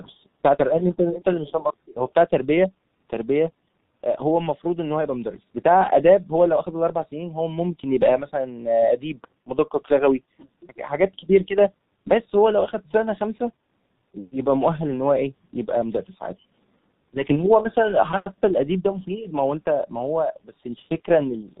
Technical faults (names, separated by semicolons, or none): G.723.1 codec